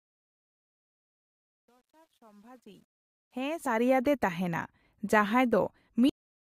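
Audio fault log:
0.00–3.91 s, truncation distortion on the fade: the fade-in is gritty, worst up to 2.99 s, as if the gain stage kept only 10 bits without dither.
3.65 s and 5.88 s, damaged data in the compressed stream: two quick blips where the decoder lost sync on bad frames and searched for the next frame header.
6.09 s, cut-off end: the sound stops dead mid-sound and drops straight to digital silence with no decay, so the final buffers were never written out.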